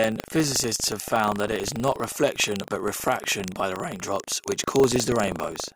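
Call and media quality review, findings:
Buffer tearing throughout: robotic 25 Hz rattle on speech, only while signal present. Ring-buffer writer and reader crossing each 40 ms period; a small slice of each period replays audio from roughly 150 ms earlier.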